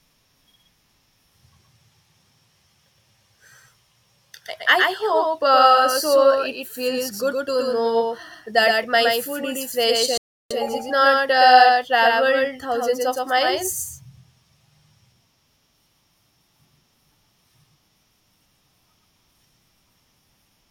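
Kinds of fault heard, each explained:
Doubled audio track: A second copy of the same speech is likely being mixed in from a slower capture path or an out-of-step edit. It runs through the whole clip, trailing the original by roughly a tenth of a second and sitting around 5 dB quieter. Every syllable gets a crisp, full-band slapback with no reverberant tail or room colouring.
Rebuffering stall: The player exhausted its downloaded audio and paused until more data arrived. Right after "my food is fresh", the sound drops to dead silence from about 10.18 to 10.51 s, then picks up exactly where it left off with "is it not uh". Nothing is skipped, but the gap inserts about 0.33 s of extra time into the clip.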